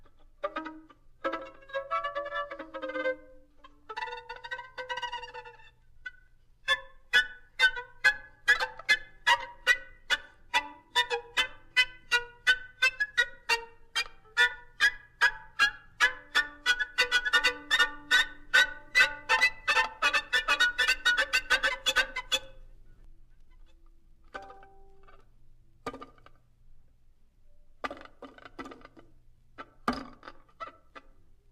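From about 17.1 s to 23.0 s there's a doubled audio track: a second full-band copy, roughly as loud as the original, trailing by about half a second. It has no reverb tail and cuts in and out abruptly, most likely from a slower second capture path.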